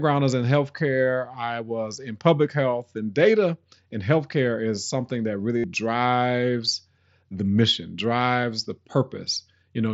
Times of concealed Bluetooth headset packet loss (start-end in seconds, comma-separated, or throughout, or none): 5.58-5.64, 8.43